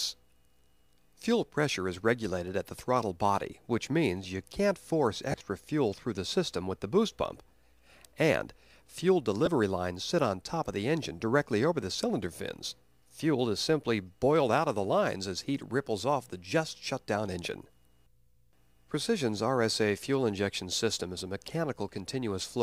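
Lost LE Audio frames break up the sound at 3.51 s, from 5.31 to 5.41 s, and from 9.45 to 9.47 s. The first gap is about 7.5 ms long, which fits a single 7.5 ms LC3 frame. The second scatters about 60 ms of loss over 90 ms, with the longest run around 20 ms. The third is 15 ms long. In each gap the LC3 decoder repeats the last spectrum with randomised signs, so tonal content briefly turns into a noisy smear.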